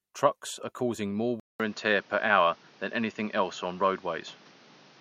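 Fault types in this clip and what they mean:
Input switched to a poorer device: after "are causing more", at 1.4 s, a 200 ms silence gives way to duller speech with nothing above 6.8 kHz, new background noise roughly 30 dB down and no level change. The likely cause is the input moving to a narrower-band microphone or headset profile.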